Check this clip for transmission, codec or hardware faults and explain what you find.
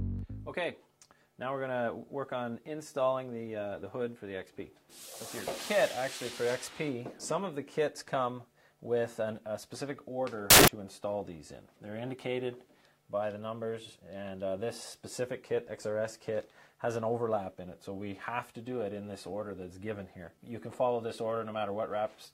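One fault is present: samples built from the wrong bytes, from 10.50 to 10.68 s. For about 0.17 s, the bytes of each sample are combined wrongly. The rapidly changing low bits end up as the largest part of each value. The result is a burst of loud, harsh broadband noise.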